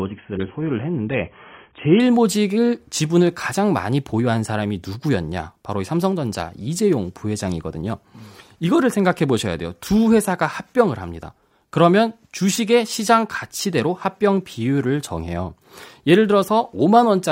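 From 0.0 to 2.0 s the player is on an adaptive stream starting at a low bitrate, before measuring the connection. Nothing sounds above 3.8 kHz and codec artefacts are stronger, which fits 16 kbit/s AAC, until quality jumps, gaplessly, to what suggests 96 kbit/s.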